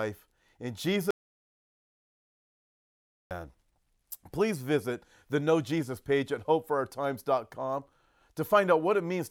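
An audio dropout to silence runs from 1.11 s to 3.31 s in this speech recording, removing about 2.2 s of sound. The speech cuts off abruptly and resumes just as suddenly, and the gap between is dead silence with no room tone at all. That pattern points to the input being lost while recording continued, most likely through a momentary disconnection or mute upstream, so whatever was said during those seconds is gone.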